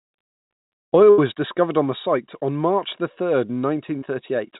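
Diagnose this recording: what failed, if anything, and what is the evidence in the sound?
At the network stage, a burst of packet loss removed about 80 ms of audio from 1.10 to 1.20 s, and the receiver's jitter buffer had nothing to play. Concealment extended the last sound and faded it across the hole, so that stretch becomes a decaying held tone or hiss rather than real audio. The speech then resumes with "discovered on the site", and the material that belonged in the gap is gone.

A second network fault, a short concealed packet loss, hits at 3.98 to 4.04 s, just after "the third". About 40 ms failed to reach the decoder in time, so the receiver synthesised a continuation from the preceding sound and crossfaded back into the real signal. It comes through as a brief smear or wobble, and a short consonant there may drop out. The narrowband G.711 mu-law path, with nothing above 4 kHz, fits a 64 kbps telephone codec.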